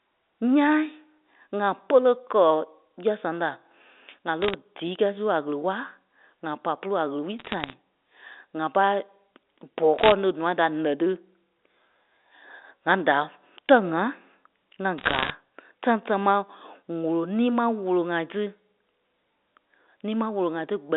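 Bit errors on a digital phone line corrupt the G.711 A-law samples in four bursts: 4.42 to 4.54 s, just before "díi kɛ́ɛi su a"; 7.39 to 7.74 s, right after "pôlu a ɣele wulii"; 9.99 to 10.12 s; and 14.98 to 15.30 s. Flipped bits turn individual samples into wrong values, and where a sign or high-order bit is hit, the speech gets sharp ticks. The error rate rises from about half a percent to over one percent in the last burst, so that burst crackles most densely.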